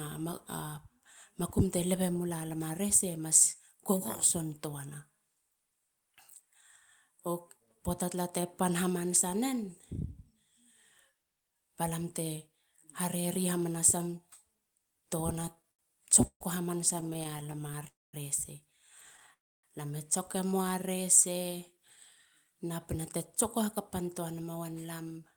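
From 15.27 to 17.87 s there's a repeated stalls (stutter) stretch: thirty short gaps, the longest 134 ms, where the buffer kept running dry and the last sound got stretched, so the speech drags and hiccups.

Then two call audio freezes, at 17.87 to 18.15 s and 19.33 to 19.65 s. Each is a brief fading buzz or hiss into mostly silence, then the speech picks up where it stopped, likely packets held up in transit.

At 20.62 to 21.74 s a jitter buffer slow-down repeats pitch periods, adding 44 ms, so the speech plays at 97% speed with unchanged pitch.

Finally, 23.61 to 25.31 s is a jitter buffer speed-up: about 150 ms gets trimmed out, and the speech runs at 107%, slightly hurried but same pitch.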